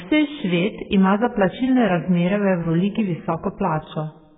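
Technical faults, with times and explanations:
Throughout, AAC compression: nothing above 3.7 kHz. The sound is dull and heavily smeared. Likely a bitrate around 8 kbps starving the coder.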